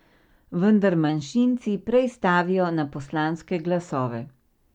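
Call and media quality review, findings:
Drift correction step, 1.09–3.34 s. Speech runs 5.8% fast, pitch raised 98 cents, near a semitone, then snaps back. Likely clock-sync resampler stepping playback rate in one jump to refill or drain its buffer.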